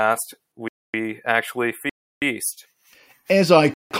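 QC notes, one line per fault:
0.68–0.94 s: block of digital silence. The speech drops to silence for 256 ms and returns with no fade, leaving a clear hole.
1.89–2.22 s: block of digital silence. A 324 ms stretch of zeros, the longest gap, cutting out and back with no fade.
3.74–3.91 s: block of digital silence. 171 ms of zeros, which fits an 8192-sample block left unfilled when the output buffer was not supplied in time.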